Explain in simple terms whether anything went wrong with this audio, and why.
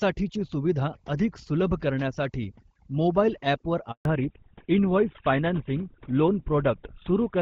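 Throughout the recording, the background is turned down and breaks up into twinkling specks. That is overdone noise removal: a cleanup tool set too strong muted quiet parts of the speech along with the noise.

From 3.91 to 4.05 s the sound drops out completely for about 140 ms. This is a handover gap. While the phone switched networks, no speech got through, so that moment is lost.

From 4.05 s to the end, the speech sounds duller, muffled and rougher, because nothing above 4 kHz remains. This is a fallback to narrowband: the call left HD Voice for an older, lower-quality phone format.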